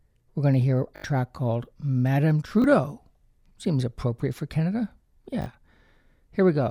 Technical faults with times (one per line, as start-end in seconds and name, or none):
0.96-1.04 repeated buffer
2.62-2.64 repeated buffer
5.42-5.46 repeated buffer